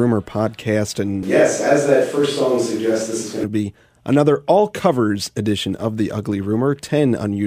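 In this speech clip, from 1.23 to 3.44 s the sound turns abruptly roomy and hollow, thinner in the bass and with noise roughly 25 dB below, at about the same level: likely a switch to a distant microphone.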